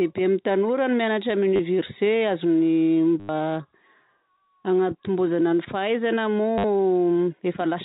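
At 1.56–1.59 s, 3.20–3.29 s and 6.58–6.64 s the speech stutters robotically. This is packet loss with the last packet repeated, consistent with 10 ms packets. Runs buzz near 100 Hz. The waveform shows identical tiled segments, and the spectrogram shows evenly spaced vertical stripes.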